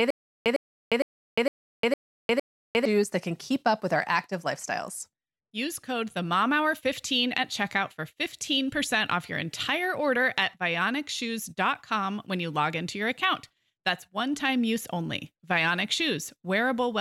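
From the very start of the speech until 2.85 s, just before "that can keep up", there is a stutter with silent gaps already under way. A burst of about 104 ms plays, then about 354 ms of digital silence, repeating every 458 ms for six cycles. This is likely a stalled player or stream replaying its last buffered fragment at each retry and then running dry. The speech that belonged in those gaps is missing.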